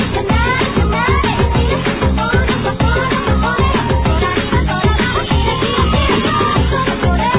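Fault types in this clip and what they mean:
No technical faults can be heard in this audio. There is nothing here to list under any fault type.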